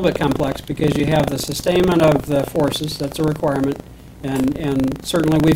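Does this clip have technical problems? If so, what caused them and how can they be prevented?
Yes, buffer tearing throughout: a 25 Hz rattle where a small slice of every 40 ms buffer replays audio about 70 ms old, leaving hard joins. On a spectrogram these show as thin vertical broadband lines every 40 ms, and on the waveform as abrupt steps. Keeping the writer safely ahead of the hardware read pointer with adequate buffering prevents it.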